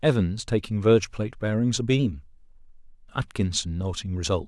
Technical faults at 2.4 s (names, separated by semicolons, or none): drift correction step